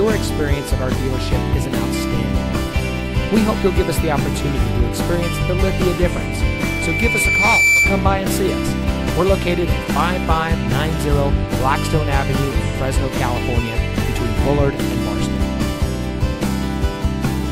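From 6.04 to 8.16 s, loudspeaker feedback squeal: speaker-to-microphone loop rings at 2.3 kHz, swelling over a second or so into a bright spectrogram line.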